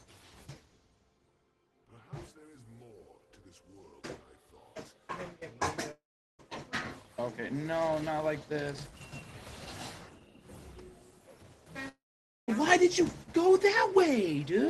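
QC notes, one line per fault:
5.91–6.41 s and 11.89–12.50 s, long network dropout: the sound smears into a brief fading buzz, then drops to silence for about 0.39 s and 0.51 s and resumes with 0.48 s and 0.6 s lost. Packets likely stopped arriving, and the receiver's concealment ran out.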